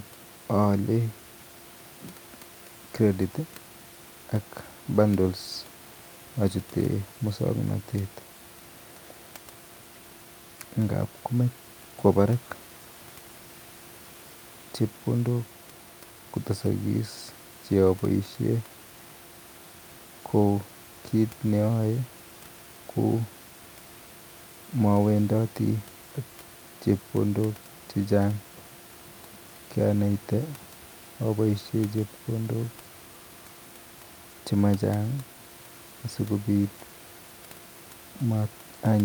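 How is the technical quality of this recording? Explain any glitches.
Nothing stood out on listening to this speech recording, apart from a faint room background sitting about 22 dB below the speech, which is part of the recording space rather than a glitch.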